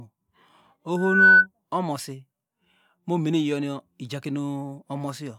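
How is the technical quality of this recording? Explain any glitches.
The recording has one clear fault, loudspeaker feedback squeal, from 0.96 s to 1.47 s. A single 1.5 kHz tone swells over roughly a third of a second to about 15 dB above the speech. The microphone was picking up its own loudspeaker, so the loop gain passed unity at that frequency and the tone fed on itself until it was cut off.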